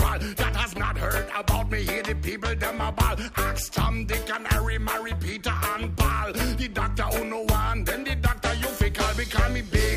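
No technical fault can be heard anywhere in the clip. There is nothing here to place on a timeline or trace to a cause.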